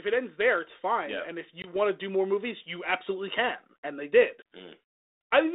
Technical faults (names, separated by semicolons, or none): packet loss on an ADPCM call